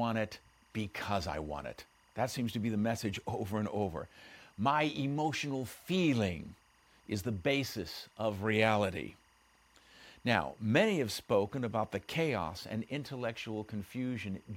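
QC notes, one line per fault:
Throughout, timecode bleed: 24 fps linear timecode leaks in about 35 dB under the speech, toggling near 1 and 2 kHz as a chirping warble.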